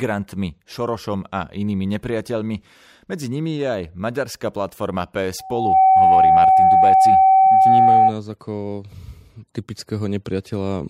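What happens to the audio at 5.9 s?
At 5.9 s the clip is inside a loudspeaker feedback squeal that runs from 5.39 s to 8.14 s, starting just after "je aj maďarská platforma". The microphone is picking up its own loudspeaker, and at 762 Hz the loop gain exceeds one, so that tone reinforces itself on every pass. It swells in under half a second into a steady howl roughly 15 dB above the speech.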